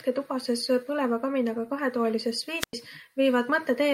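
At 2.59 to 2.73 s, a brief rise of hiss precedes a 97 ms near-silent hole: a wireless microphone squelch dropout, the fading signal tripping the receiver's mute.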